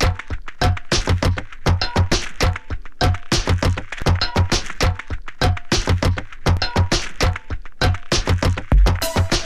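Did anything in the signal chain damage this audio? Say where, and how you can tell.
Yes. A DC step occurs at 2.12 s, 4.02 s and 6.57 s, each a low thump under the unchanged sound. The waveform's zero line jumps by about -13 dBFS at the first two and about -15 dBFS at the third. The offset then bleeds away through a 20 Hz high-pass. This points to the converter stage, either recalibrating its offset or having an offset-carrying analogue input switched in, rather than to any later processing.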